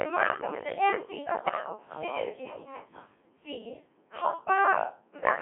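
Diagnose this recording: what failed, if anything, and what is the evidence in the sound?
Codec stage: the speech has been through the Codec 2 vocoder with heavy damage throughout. It sounds robotic and buzzy, which fits a rate near 1.6 kbit/s. Only pitch, voicing, energy and envelope survive, resynthesised from sine waves in a 200 Hz to 3.4 kHz band. A spectrogram shows clean harmonic combs with no fine detail.

Network or radio link stage: bit errors on digital voice radio hit from 1.45 to 1.69 s, roughly a few percent of bits. That points to about five frames decoded from corrupted parameters. The voice jumps in pitch, level and tone into warbling gibberish. On a spectrogram the harmonic spacing and energy shift abruptly from block to block.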